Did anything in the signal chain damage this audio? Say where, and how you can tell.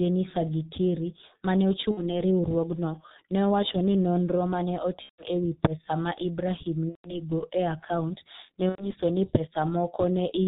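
Yes, at the codec stage, throughout. The speech is band-limited to about 4 kHz and sounds muffled and hoarse, with smeared consonants, which fits the G.723.1 codec at its 6.3 kbit/s rate. Its slowly updated 30 ms frame model is what distinguishes it from simple low-pass filtering.

Network stage, at 1.91–2.15 s (after "ma ne"), 5.03–5.27 s (between "nonro ma ne" and "e wi pesa ma"), 6.89–7.14 s and 8.69–8.94 s (after "akaunt ne"). Each time there is VoIP packet loss concealed by the speech codec. The decoder stretches the last sound into a fading buzzy tone or coloured noise, which is muted from the third lost frame in the last three gaps, and the sound stays weak for a moment after each gap. The durations suggest about 60, 150, 150 and 90 ms of lost frames.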